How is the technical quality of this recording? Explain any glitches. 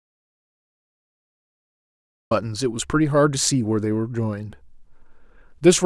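The recording has one clear glitch. It opens in silence. There is an audio dropout to silence from the very start until 2.31 s. That stretch is silent, with no room tone or hiss at all. The speech then enters abruptly at 2.31 s, already under way. The likely cause is a lost input, such as a disconnected device, a failed link or a mute. Recording continued and wrote silence, so whatever came before that point is gone.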